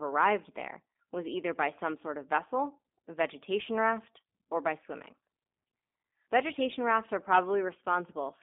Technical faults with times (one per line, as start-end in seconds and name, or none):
0.00-8.43 G.729 codec